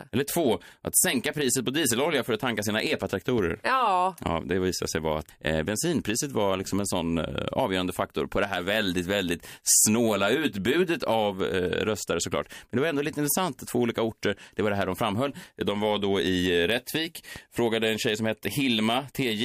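Loud pops at 3.38 to 3.41 s and 17.36 to 17.39 s interrupt this speech clip, each a single sharp burst while the speech continues underneath. The first peaks roughly 10 dB above the speech level and the second roughly 5 dB above it. Each burst lasts under 30 ms, which fits a sudden electrical step or pulse, likely from a plug, switch, static discharge or driver glitch, passing through the downstream circuitry into the recording.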